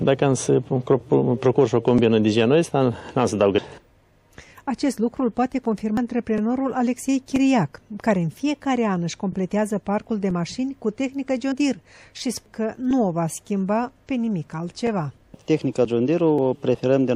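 At 3.58, 5.97, 11.52, 12.46 and 16.38 s the sound jumps ahead, skipping about a third or a tenth of a second, likely a dropped buffer (overrun).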